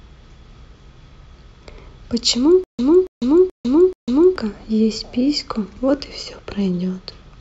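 It's a speech clip with a stutter with silent gaps from 2.64 to 4.36 s: a 280 ms fragment repeats four times, each followed by about 150 ms of dead silence, a steady 430 ms cycle. That's likely a stalled stream replaying its last chunk, so the real audio there is gone.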